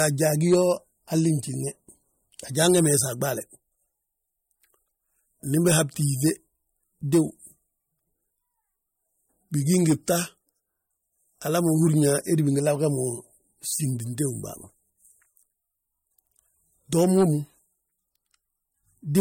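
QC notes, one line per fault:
Throughout: low-bitrate audio saved at a high bitrate. Content above 16.6 kHz is missing, and the speech carries the smeared, swirly artefacts of heavy MP3 coding. This likely comes from a roughly 48 kbit/s MP3 re-encoded at a high rate, which cannot restore the lost detail.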